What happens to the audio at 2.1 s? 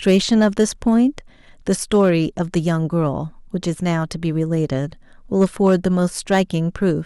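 A brief crackle rides on the speech peaks from 1.94 to 2.10 s. This is hard clipping: the signal overshoots the level a stage can pass by about 2 dB, so its peaks are sliced flat, adding harsh high harmonics.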